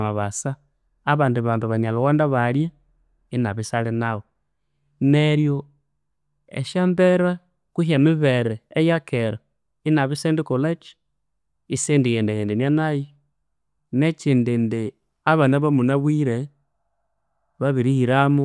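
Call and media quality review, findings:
No faults found; no action required.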